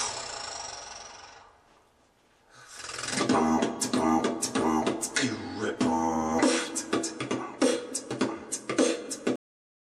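Right at 9.36 s the sound just stops dead, and that's a cut-off end. Whatever was playing gets chopped mid-sound, with no fade or natural decay, and the last half-second or so sits in flat digital silence. What went wrong is that the final stretch of audio never made it out: those closing buffers simply weren't written or played, so the file ends abruptly instead of letting the sound finish.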